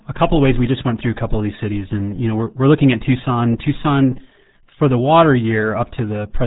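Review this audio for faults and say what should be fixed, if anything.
RealAudio 14.4 codec damage runs the whole clip: the speech is muffled and gargly, with nothing above 3.8 kHz, which fits an 8 kbit/s dial-up encode. Re-source from the original and use a modern wideband codec at a decent bitrate.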